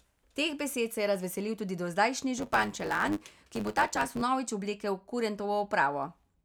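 Speech clip with a block size mismatch (truncated) from 2.37 to 4.22 s, right after "je razveselil tudi dozdajšnji": block tails are discarded, giving a 100 Hz buzz and speech running 1.09 times faster at near-normal pitch.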